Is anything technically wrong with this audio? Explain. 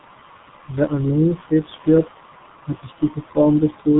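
Yes. Throughout the speech, G.723.1 codec damage is heavy: 30 ms frames and a slowly updated voice model, at a rate that fits roughly 6 kbit/s, make it muffled and hoarse with smeared consonants. A spectrogram shows a flat ceiling at 3.9 kHz with nothing above.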